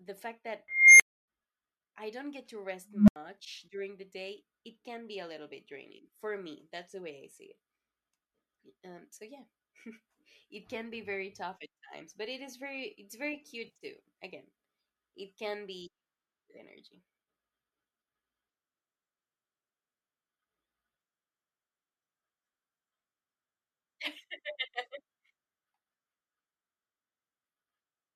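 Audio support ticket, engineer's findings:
Unstable filter, 0.68–1.28 s: tone around 2 kHz swells over about 0.32 s, clips, then cuts to 0.28 s of silence. Recursive filter coefficients diverged, output overflowed until reset. Unlike feedback howl, it dies abruptly instead of sustaining.

Unstable filter, 2.89–3.16 s: same signature, lower tone around 200 Hz, 0.19 s build-up, 0.08 s silence after.

AAC frame loss with concealment, 13.67–13.85 s: smeared, noisy patch, no hard gap. About 110 ms lost across 140 ms, runs no longer than roughly 40 ms, fitting short frames of the likely low-delay AAC compression (AAC-ELD, 64 kbps) path. Decoder filled gaps from the last good spectrum. Unlike a plain dropout, it never goes silent.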